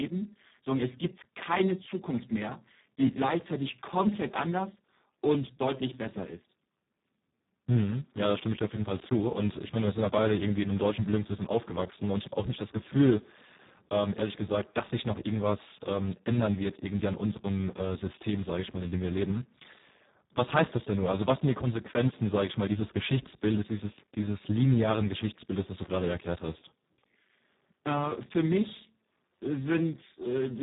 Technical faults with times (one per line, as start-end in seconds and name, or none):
0.00-30.63 Speex codec